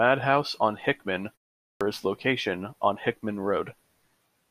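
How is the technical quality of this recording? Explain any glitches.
There is one glitch. Clipped start after a pause, at 1.73 to 1.81 s: after a 0.44 s silence, the output device had dropped into a low-power or unlocked state and needed time to come back, so the first 77 ms of the next utterance never reached the output. The speech therefore bursts out of silence with its opening sounds missing, giving an abrupt, chopped onset rather than a natural attack.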